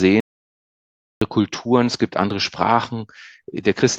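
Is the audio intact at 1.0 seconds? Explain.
No. The input was likely lost, with the recorder writing silence instead, an audio dropout to silence running from 0.20 to 1.22 s. At 1.0 s there is silence with no room tone, and the sound cuts out mid-flow before returning.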